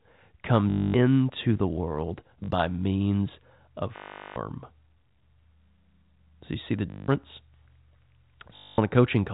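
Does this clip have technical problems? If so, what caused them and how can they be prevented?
Yes. Packet loss with last packet repeated: the receiver replays the previous packet through gaps at 0.70–0.94 s, 2.44–2.48 s (after "the world"), 3.96–4.36 s (after "means of"), 6.90–7.08 s (after "you see the"), and 8.56–8.78 s. The replays buzz at about 50 Hz, which fits 20 ms packets. Prevention: use a jitter buffer with proper packet loss concealment and forward error correction.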